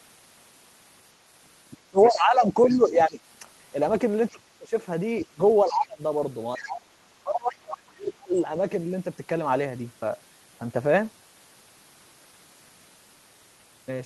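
From 1.72 to 3.19 s the talker's level sinks by roughly 20 dB, with about a second of the stretch pulled down. This is speech suppressed in double talk: the likely cause is an echo canceller that, with both ends active, could not tell the local talker from loudspeaker echo and attenuated everything. Inside that dip, from 1.98 to 2.77 s, the other side's voice leaks through at about 15 dB below the talker, a residual second voice the canceller likely failed to remove. At 4.31 to 4.73 s the talker ducks again by about 25 dB for roughly 0.3 s. Leakage returns faintly, about 25 dB down, from 5.24 to 5.77 s, overlapping suppression from 5.31 to 6.01 s that drops the talker by about 20 dB over roughly half a second. A brief scrap of the far voice appears at 6.56 to 6.66 s, again about 25 dB down, just as the deepest suppression begins: from 6.57 to 8.39 s the talker is cut by up to about 35 dB, pulled down for roughly 1.5 s. 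Within it, from 7.52 to 7.78 s, the far voice comes through at about 15 dB below the talker.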